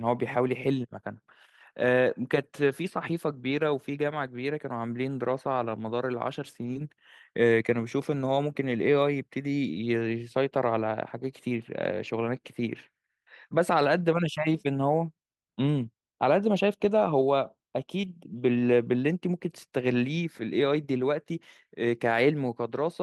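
Lost packets rebuilt from error correction come first, at 3.51–3.57 s and 5.01–5.03 s. The receiver played the low-bitrate backup copies carried in the following packets, so there is no gap, only brief rough, noisier patches of 40 ms and 20 ms.

Short concealed packet loss follows at 6.73–6.77 s. About 20 ms of audio arrived too late, and the decoder extended the preceding sound into the hole before blending back. It is heard as a quick smear, and its final 20 ms, 6.75–6.77 s, is again a rougher rebuilt copy.

More error-correction rebuilds sound grainy at 12.05–12.11 s (40 ms), 14.53–14.63 s and 16.97–17.07 s (each about 60 ms, fitting three lost packets). A second concealed loss at 18.01–18.05 s smears about 20 ms, ending in a rebuilt copy at 18.03–18.05 s.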